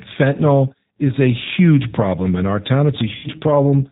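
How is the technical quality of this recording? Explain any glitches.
The recording is plainly degraded by low-rate speech coding, with one short dropout near the end.

Throughout, the G.729 codec rebuilds the speech from a vocal tract filter, a pitch estimate and a few pulses per frame, at a rate that fits 8 kbit/s. Everything above 4 kHz is gone, so the speech sounds muffled, rough and slightly synthetic.

From 3.15 to 3.28 s, just after "problem in our town", VoIP packet loss was concealed by the speech codec. About 90 ms of audio, which fits three lost packets, was never received. The decoder extended its last pitch and filter at falling gain, so the sound turns into a buzzy tone or coloured noise, fades, and stays weak briefly after packets resume.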